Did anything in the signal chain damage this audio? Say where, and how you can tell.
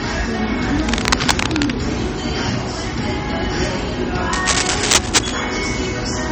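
Yes. Codec stage: watery, swirling artefacts and dulled treble run plainly throughout, likely MP3 compression at a low bitrate that fits roughly 34 kbps, zeroing weak frequency lines.

Analogue wiring: scratchy, rustling noise bursts at 0.79–1.71 s, roughly matching the signal level, and 4.33–5.32 s, louder than it. Likely cable scratch noise from unstable contact resistance.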